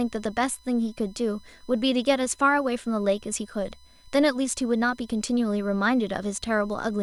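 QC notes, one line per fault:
Throughout: USB whine, a fixed-pitch tone at 1 kHz with its strongest harmonic at 4 kHz, around 35 dB below the speech, from USB frame-rate current leaking into power or ground.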